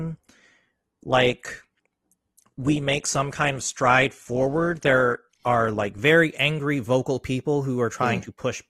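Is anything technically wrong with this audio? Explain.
Yes. From the start to 6.0 s, just before "angry vocal people", the speech plays as an adaptive stream starting at a low bitrate. Nothing reaches above 12.1 kHz and codec artefacts are stronger, which fits a coarse 16 kbit/s Opus version. Once the player had measured the connection, it switched to a much better one, likely around 64 kbit/s. Unlike a dropout or rebuffering, the clarity jumps with no gap or pause.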